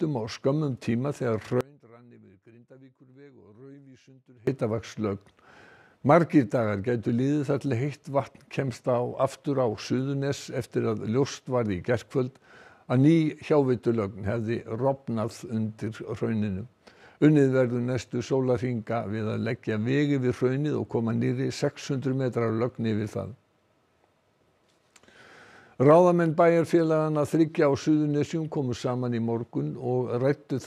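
From 1.61 to 4.47 s there's an audio dropout to a faint residue: the sound snaps down to a quiet leak, likely from a lost feed.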